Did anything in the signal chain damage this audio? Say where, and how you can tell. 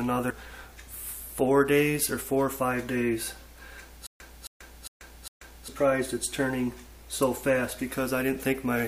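Yes. At 0.29 s, damaged data in a compressed stream at the codec stage produces a brief glitch as the decoder misreads a corrupted frame and resyncs.

From 4.07 to 5.68 s, the same 269 ms fragment repeats four times every 404 ms, with about 136 ms of digital silence between. This stutter with silent gaps likely comes from a playback or stream stall, and the gaps tell it apart from a seamless loop.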